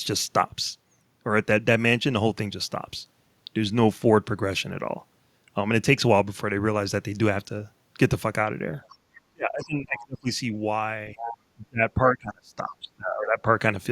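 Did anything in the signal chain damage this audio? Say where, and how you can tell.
Yes. Other side's voice leaking through, 8.88–8.96 s and 11.16–11.36 s: a second voice sounds far below the speech, then only somewhat below. The call-processing echo canceller likely left residual loudspeaker echo.

Speech suppressed in double talk, 9.3–10.3 s and 11.55–13.48 s: the talker's level plunges, up to about 30 dB. The echo canceller, likely unable to separate the two talkers, attenuated both.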